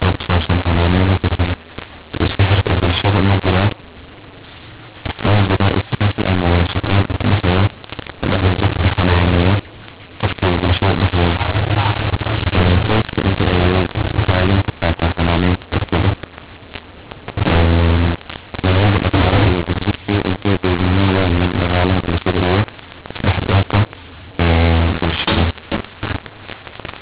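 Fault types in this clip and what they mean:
mu-law and A-law mixed up: A-law-coded speech is decoded as mu-law, scrambling the levels, so it's harsh and distorted throughout and pauses fill with noise.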